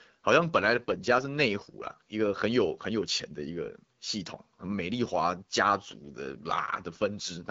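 From 0.56 s to 2.01 s there is an AMR rate drop: the speech turns rougher and more synthetic, which fits the AMR-WB codec stepping down from 12.65 to 8.85 kbit/s to protect a weak link. Bandwidth holds, with no gap, and clarity returns when the rate recovers.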